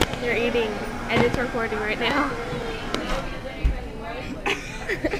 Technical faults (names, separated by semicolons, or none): loud pop